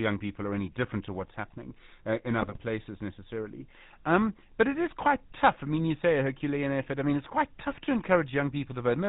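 From the start the speech carries GSM full-rate codec damage, plainly audible. The coder rebuilds the voice from a vocal-tract filter fed by a regular pulse excitation in which only every third sample survives, and the 13 kbps stream passes nothing above 4 kHz. The result is a muffled, band-limited sound with a buzzy, gravelly roughness.

From 2.39 to 2.58 s, right after "what's happening uh in", GSM bit errors break up the signal. Corrupted bits, at a rate of about 2 percent, fit roughly ten damaged frames across that span. Wrong filter, pitch and gain values reach the decoder, so the spectrum twists and the level jumps frame by frame. It comes out as a short burst of squawks, pops and gargling.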